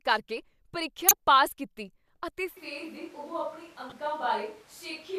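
At 1.08 to 1.11 s a corrupt frame is decoded: flipped bits in a single compressed frame send energy to the wrong frequencies, giving a loud, brief burst. A second, much quieter one follows at 3.87 to 3.92 s, spread over a couple of frames. Each lasts about as long as the frames it hits, which sets it apart from a sharp click or dropout.

From 2.57 s to the end the sound turns suddenly hollow and roomy, a few dB quieter and thinner in the bass, with room noise audible beneath it. This is likely a switch to a distant microphone. Added reverberation and background noise distinguish it from a simple gain or EQ change.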